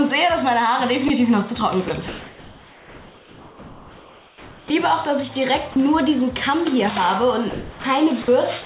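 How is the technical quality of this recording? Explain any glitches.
The recording has three kinds of voice-detector fault. They break the sound up in several places and replace the real background for over two seconds. The audio also comes through a narrow call codec path, so nothing is heard above 4 kHz.

Sound dropped by the voice detector happens at 1.08 to 1.1 s, 1.88 to 1.9 s, 5.72 to 5.76 s, 7.5 to 7.84 s, 8.22 to 8.28 s, and 8.62 s to the end. Each time the sound briefly gives way to flat, steady noise, then returns. Most gaps are tiny, only 20 to 50 ms. The one at 7.5 s is longer and loses about 190 ms of sound. The likely cause is a sender detector that mistook quiet parts of the sound for background and stopped transmitting.

Comfort noise in place of the background runs from 2.08 to 4.7 s. The real background sits about 25 dB below the loudest sound. Here it is replaced by a smooth, featureless hiss, about 2 dB quieter than the real background. 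Its texture and small details vanish for those 2.6 seconds. This is likely discontinuous transmission. The sender went silent during the pause, and the receiver synthesised noise shaped roughly like the background.

An onset clipped by the voice detector comes at 4.68 s, right where the comfort noise ends. The returning sound starts abruptly, missing its first 20 ms. Its soft beginning is gone, so it pops in rather than rising. The detector was likely slow to notice that sound had resumed. The first moment was never sent, and filler noise was played instead.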